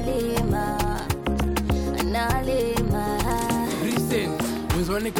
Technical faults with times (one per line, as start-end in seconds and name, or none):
0.00-5.20 filter restarted on every block